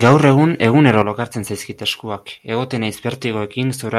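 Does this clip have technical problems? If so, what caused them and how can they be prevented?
Yes. From 0.06 to 0.14 s the loudest part of the speech has a harsh, crackling edge, most likely from microphone overload. The input was driven roughly 3 dB past the converter's limit, so the tops of the peaks were sliced flat across a small fraction of samples. Unlike codec distortion, the grit appears only on the loudest peaks and vanishes as the level falls. Keeping the input gain low enough to leave a few decibels of headroom prevents this.

At 1.02 s the voice and the background drop together by about 6 dB in a single step, likely a microphone volume step-down by the call software reacting to the earlier overload. It differs from a speaker moving away from the microphone because the change is instant and the room sound drops by the same amount as the voice. Disabling automatic input-gain adjustment and setting a safe level manually avoids this.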